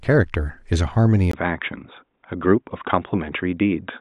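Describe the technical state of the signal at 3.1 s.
At 3.1 s the speech sounds dull and boxy, with nothing above about 3.8 kHz, and a faint new background noise sits far below it. The loudness is unchanged. This state runs from 1.31 s to the end at 4.0 s and begins with a 20 ms gap. It is likely an input switched to a poorer device: recording moved mid-clip to a narrower-band microphone or headset call profile with its own tone and noise floor.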